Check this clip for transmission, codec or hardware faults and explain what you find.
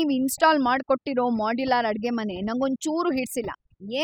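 One processing fault is present, and it lasts the whole clip. Overdone noise removal runs from start to finish: a noise reducer set far too aggressively cuts individual frequency bands deeply whenever they sit close to its noise estimate, taking softer parts of the speech too. The background drops and breaks up into twinkling specks.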